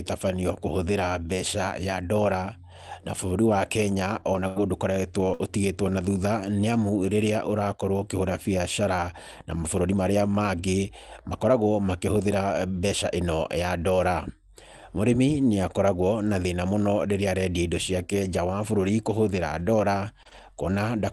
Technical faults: lost packet rebuilt from error correction; burst of packet loss; short concealed packet loss

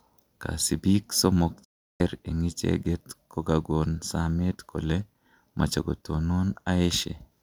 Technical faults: digital broadcast dropout

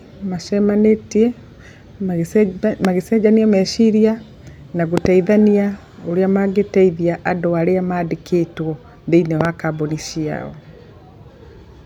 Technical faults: loud pop

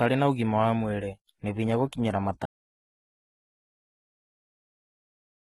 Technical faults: HE-AAC compression; audio dropout to silence

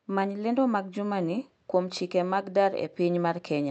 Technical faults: clock drift between sender and receiver; repeated timing corrections

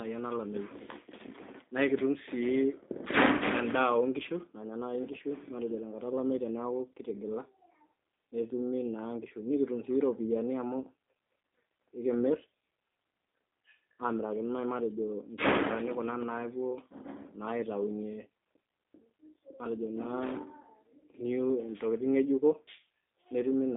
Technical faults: G.729 codec

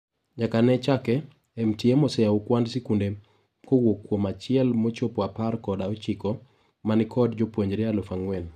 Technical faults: none

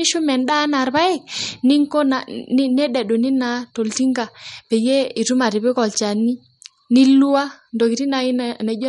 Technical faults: MP3 compression

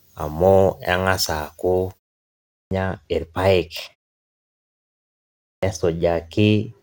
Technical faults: pre-emphasis left on; clipped start after a pause

